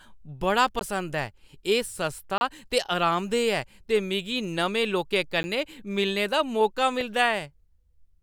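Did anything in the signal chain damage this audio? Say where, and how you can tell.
Yes. The driver or buffer stage failed to deliver samples in time, leaving blocks of digital silence in the speech at 0.79 s (17 ms), 2.38 to 2.41 s (30 ms), 5.43 s (10 ms) and 7.01 s (3 ms). The 10 ms and 3 ms blocks are too short to be heard as silence and come across as a tick or dip, and the 30 ms block is a brief hole.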